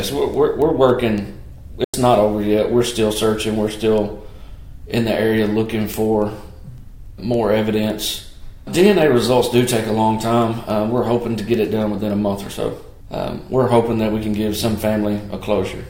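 From 0.34 s to 15.74 s, word clock ticks recur roughly every 0.3 s, some fifty in all. The receiving device runs on an unlocked clock off by roughly 70 ppm, dropping or repeating one sample per slip. Their regular spacing and uneven sharpness distinguish them from random digital clicks.

At 1.84 s the sound cuts to silence for about 93 ms, resuming at 1.94 s as though it had continued underneath. This is likely a Bluetooth dropout, consistent with a few lost packets. Unlike a tick, it is a clear hole rather than a brief spike.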